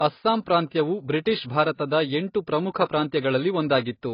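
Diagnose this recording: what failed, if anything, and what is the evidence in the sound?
The failure is at the codec stage, and it runs through the whole speech clip: there's nothing above about 5.4 kHz, and the smeared, swirly texture of a very low-bitrate encode is baked in, even though the file itself is a large MP3. That's most likely low-bitrate audio saved at a high bitrate. The sound points to something like a 16 kbit/s AAC pass first, then a 320 kbit/s MP3 re-encode that faithfully preserved the damage without restoring anything.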